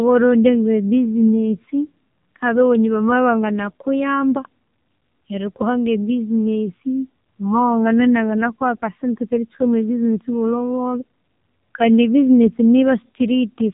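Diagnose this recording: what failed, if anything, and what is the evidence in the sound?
The failure is at the codec stage: the speech has passed through the AMR narrowband mobile codec, and the damage runs the full length of the clip. Nothing above 4 kHz survives, so the sound is dull and band-limited. The voice is buzzy and synthetic rather than merely muffled, the mark of a vocal-tract model rebuilt from a few excitation pulses per 5 ms subframe. That level of degradation fits one of AMR-NB's low modes, around 6 kbps.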